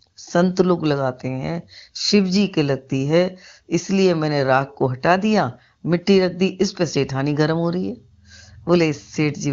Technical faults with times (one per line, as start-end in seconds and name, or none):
none